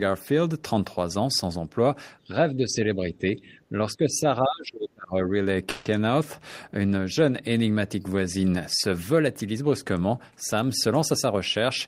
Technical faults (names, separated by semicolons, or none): speech suppressed in double talk; call audio freeze; jitter buffer speed-up